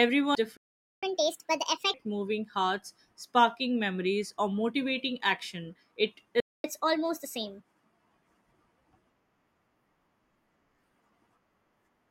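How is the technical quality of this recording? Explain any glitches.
The recording has clear delivery faults: a skipped chunk near the start and two stalls, each followed by a sped-up stretch.

At 0.35 s, compressed frames were skipped. Whole frames were lost or rejected by the decoder, so the speech jumps ahead by roughly 0.4 s.

From 0.57 to 1.03 s, and again from 6.40 to 6.64 s, there are playback stalls. The player was likely starved of data or blocked. The output goes silent mid-flow for about 0.46 s and then 0.24 s before the speech resumes.

Each stall is followed by catch-up at higher speed. The player resamples its backlog faster to regain the lost time. From 1.03 to 1.94 s, starting with "moving hearts sparking memories", the speech runs at 1.5x and rises roughly seven semitones. From 6.64 to 7.60 s it runs at 1.25x, about four semitones higher.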